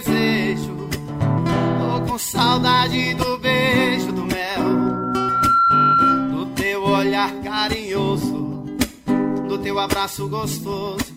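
Loudspeaker feedback squeal runs from 4.50 to 6.44 s: a microphone is picking up its own loudspeaker, and at 1.4 kHz the loop gain tops one, so that tone swells over about a second into a piercing squeal around 5 dB above the surrounding sound.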